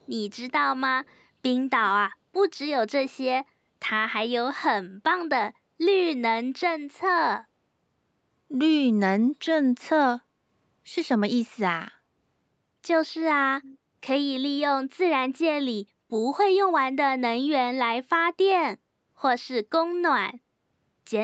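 A speech clip with faint, delayed ghost copies of the voice at 0.00 to 0.07 s, 0.32 to 0.37 s and 1.05 to 1.21 s, plus a clearer one at 13.62 to 13.78 s, each trailing by 186 ms. This is an echo leak, likely a speakerphone echo canceller letting residue through.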